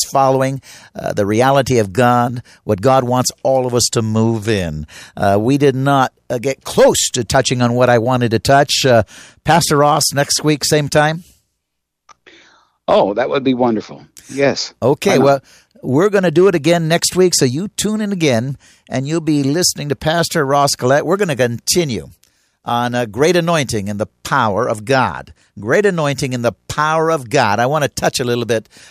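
Speech recording with no technical faults to report.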